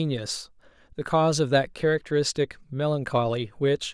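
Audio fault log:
No faults detected in this speech recording.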